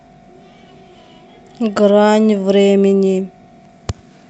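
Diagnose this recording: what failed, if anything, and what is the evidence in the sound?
Nothing failed here: the speech sounds just as you'd expect from a normal WebRTC call path, with the top end rolled off around 8 kHz the way an Opus call at that bandwidth setting does, and nothing in the sound points to trouble at any stage.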